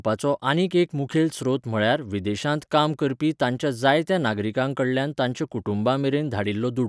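No faults detected anywhere in the speech.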